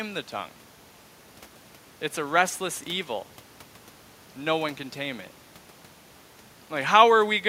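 No technical faults can be heard anywhere in this speech recording. There is nothing to place on a timeline.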